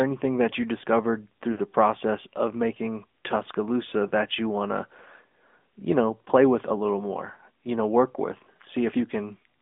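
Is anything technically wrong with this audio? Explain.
Yes. The speech has gone through the AMR narrowband mobile codec and also suffers lost AMR speech frames.

Throughout, the signal was squeezed into a telephone channel. It was sampled for narrowband transmission, passing only about 200 Hz to 3.6 kHz, and coded by a vocal-tract model excited by sparse pulses. The damage fits the 10.2 kbps mode and is plainly audible. The voice sounds thin and muffled, with no high-frequency air, and carries a buzzy, synthetic edge.

At 1.52 to 1.61 s, between "anything that you discovered" and "process of making", about 60 ms failed to decode, which fits three consecutive bad frames. The decoder repeated the last good pitch and spectral settings at falling gain, so the sound smears briefly and sags toward silence before the voice returns rough. At 4.08 to 4.11 s, just before "you want to", a single lost 20 ms frame causes a short dip.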